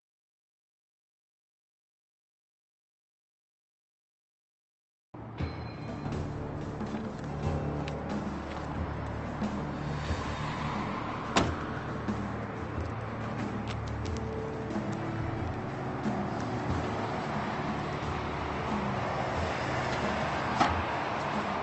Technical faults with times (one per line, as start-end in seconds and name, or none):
6.05-6.07 skip ahead